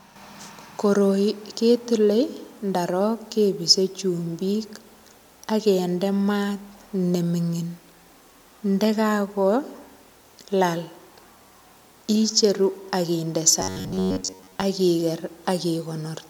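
Audio likely arrived too seldom from about 13.60 to 14.62 s, between "icheru ak inde" and "ak iger", so a roughly 10.7 ms buffer was replayed through most of that stretch. This produces robotic sound from repeated short buffers: a rigid, metallic 93.8 Hz buzz that still loosely tracks the speech.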